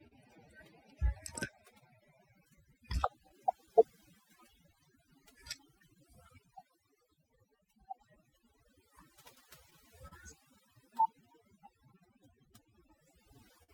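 Overdone noise removal runs through the whole clip. A noise reducer set far too aggressively pushes individual frequency bands down or out whenever they sit close to its noise estimate, taking quiet parts of the speech with them. The pauses fall to near silence dotted with small twinkling specks.

Clock drift between sender and receiver is also present throughout. The sending clock runs about 3 percent slow relative to the receiver, so the jitter buffer keeps draining faster than it refills. The receiver has to keep compensating, which leaves small, unevenly spaced timing hiccups across the clip rather than one clean fault.

A short stall from a late packet comes first, at 0.07 to 0.13 s. A packet missed its slot and the jitter buffer ran dry, so the receiver held the last sound for 37 ms until the data arrived, then resumed from the same point. Nothing is lost, but the opening sound hangs slightly too long, with a faint buzz or dip.

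Repeated timing corrections run from 1.08 to 12.96 s, the drift made audible. To stay in step with the slow sender, the receiver keeps repeating short fragments, all in the same direction and at irregular spacing, playing the stretch back at about 98 percent speed and adding roughly 200 ms overall. Each edit is tiny, so the effect is mainly a slightly unsteady, dragging tempo with occasional hiccups.

Scattered short gaps fall between 3.29 and 6.17 s. About seven isolated packets were lost or late, and the receiver bridged each one by extending the preceding sound. The patches total only around 50 ms, none longer than about 10 ms, and cover roughly 2 percent of the span. The speech stays clear, but brief ticks and small smears break its surface here and there.

Repeated stalls (stutter) cluster at 9.35 to 10.13 s. Packets kept arriving late, so the buffer emptied three times in quick succession and the receiver stretched the last sound each time, 60 ms in all, with the longest wait 37 ms. 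Concealment fills about 8 percent of this stretch, so no speech goes missing, but the passage drags and stutters audibly.

A second short stall from a late packet closes the clip at 13.63 to 13.70 s. Again the buffer ran empty while a packet was overdue, and the receiver held the final sound for 49 ms before continuing. The last moment of audio is drawn out slightly, with a faint buzzy or dipping quality.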